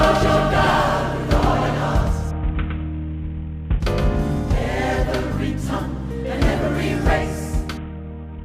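A doubled audio track runs from the very start of the audio to 4.58 s. A full-band second copy sits about a tenth of a second behind the original and roughly 5 dB quieter, with no decay or room colour, and it cuts off abruptly at 4.58 s. This is likely a second capture of the same signal through a slower path, or an edit leaving two copies out of step.

A Bluetooth SBC bit pool drop occurs from 2.31 to 3.80 s and again from 7.77 s to the end. In both stretches the treble dulls and a gritty quantisation noise rises. The sound fits the phone cutting the SBC bit pool from 28 to about 5, near 54 kbps, on a congested link. At that rate the upper sub-bands are starved and the rest are coarsely quantised until the rate recovers.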